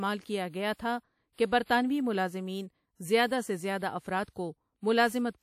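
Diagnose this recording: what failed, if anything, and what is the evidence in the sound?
The failure's at the codec stage. Throughout the speech there's a washy, ringing quality, with a hiss that swells and fades along with the voice, and nothing comes through above about 19.4 kHz. That all points to WMA compression as the likely cause, and the damage is plainly audible. A transform coder with long blocks smears its quantisation noise over tens of milliseconds, and a budget around 48 kbps starves the weaker spectral lines.

The same codec also leaves pre-echo twice. From 0.49 to 0.54 s, a short hiss of about 44 ms leads into "گیا تھا کہ برطانوی", and that onset sounds softened. Then from 1.33 to 1.38 s, right after "کیا گیا تھا", roughly 56 ms of hiss precedes "کہ برطانوی ملازمین زیادہ". In both spots a sharp attack landed late in a block, so noise sized for the loud part spilled back into the quiet gap before it.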